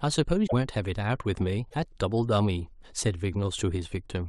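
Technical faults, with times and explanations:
0.46–0.53 s and 1.69–1.74 s, broken MP3 bit reservoir: likely missing frames left later frames decoding borrowed reservoir bytes from the wrong frame, so speech skips ahead through a brief garbled stretch.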